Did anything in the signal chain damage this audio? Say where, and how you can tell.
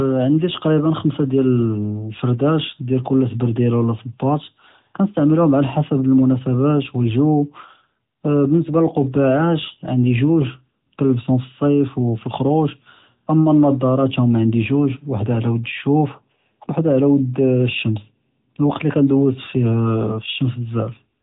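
Yes, at the codec stage: the AMR narrowband mobile codec runs through the whole clip. Nothing above 3.8 kHz survives, and the speech has a plainly buzzy, synthetic edge, which fits a mid-rate AMR-NB mode around 10 kbps rebuilding the voice from a vocal-tract model.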